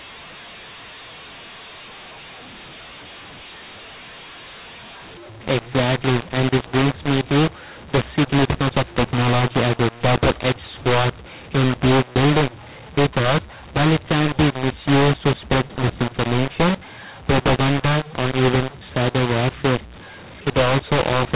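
Throughout the speech, levels sound scrambled: the speech turns harsh and distorted, and pauses fill with hiss instead of silence. That is mu-law and A-law mixed up. The G.711 audio was coded with mu-law but decoded as A-law, so every sample's level is misread.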